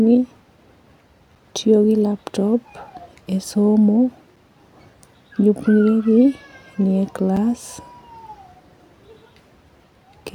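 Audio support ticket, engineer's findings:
Gap between chunks: 6.5 ms holes at 1.35 s (just before "tiyo gi laptop"), 4.36 s (after "e somo") and 7.37 s. Every 3.0 s, so chunk joins, probably padding or late starts.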